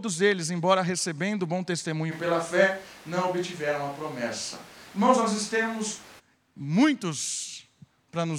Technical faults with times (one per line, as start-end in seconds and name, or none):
2.13-6.18 switch to a distant microphone